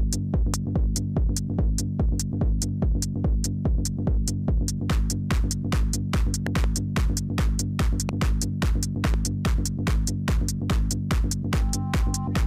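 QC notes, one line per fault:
0.54–0.56 s, 6.47–6.66 s, 8.09–8.11 s, 9.05–9.16 s: loud pop. Single sharp pops at 0.54 and 8.09, quick double pops at 6.47 and 9.05, each about 10 dB above the sound, which keeps going underneath. Likely a voltage spike from a plug, switch, static or driver glitch.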